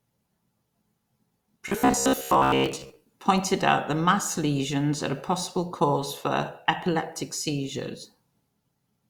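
From 1.68 to 2.99 s the speech becomes a rigid, metallic buzz near 66.8 Hz. This is robotic sound from repeated short buffers. Audio likely arrived too seldom, so a chunk of about 15 ms kept looping. The buzz ends just before "pointed out that mass".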